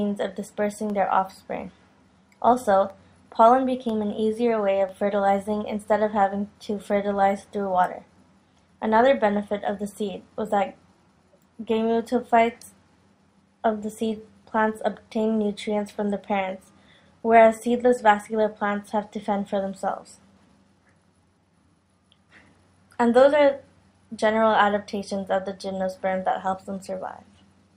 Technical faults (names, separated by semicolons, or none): periodic USB or driver dropouts